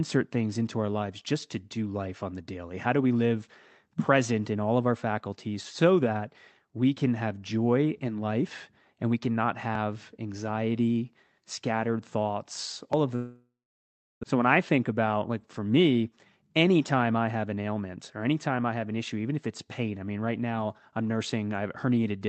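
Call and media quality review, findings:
Jump in the speech at 9.75 s after "life and we cannot" (about 20 ms lost) and 12.93 s (about 70 ms lost); likely dropped buffer (overrun), capture samples overwritten before being read.

13.15–14.25 s: concealment buzz fading to silence for about 0.7 s, roughly 1 s of speech missing on resume; likely long network dropout, receiver concealing until packets return.

14.89–15.59 s, between "when I think" and "me anytime I have": hurried speech at 107% speed, same pitch; likely jitter buffer speed-up, about 50 ms of pitch periods removed to cut delay.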